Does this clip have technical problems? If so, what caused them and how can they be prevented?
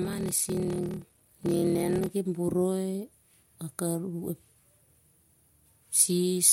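Yes. From 0.00 to 2.09 s there is a block size mismatch (padded). Short blocks, consistent with 1024 samples, are zero-filled to a larger read size, causing a steady 38.3 Hz buzz and speech slowed to 0.889×. Random dropouts skip audio rather than slowing it. Matching block sizes between stages prevents this.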